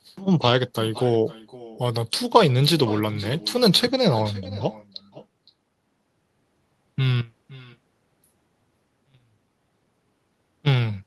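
Speech with an echo with no canceller running throughout: each phrase returns about half a second later, roughly 19 dB quieter and thinner, from the far end's loudspeaker feeding its microphone. Unlike room reverberation, it is a distinct, delayed repeat rather than a smooth tail.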